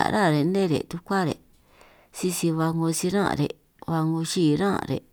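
No technical faults can be heard anywhere in the speech, and the signal stays continuous and stable throughout.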